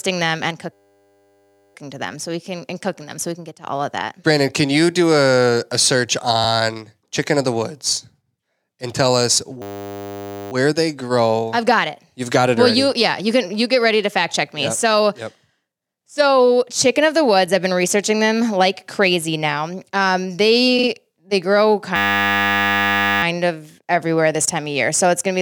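At 0.73 s, just after "them and", a system hang loop begins and lasts until 1.75 s, before "to them so we". The driver stalled while the sound hardware kept replaying one 10 ms slice of its ring buffer. That slice repeats about a hundred times. It is heard as a steady 100 Hz buzz in place of the speech. Little or no audio is lost. The same hang returns from 9.62 to 10.52 s, with the same 100 Hz buzz.

At 20.78 s, just before "they grow", there are repeated frames. A short run of compressed audio was sent again and decoded twice more. The repeated block is about 46 ms, which fits a pair of codec frames. It sounds like a quick stutter. The clip grows by about 93 ms.

From 21.96 to 23.23 s, right after "they grow", the system hang loop comes back. It plays the same 10 ms loop as a 100 Hz buzz and lasts until "of everywhere this time".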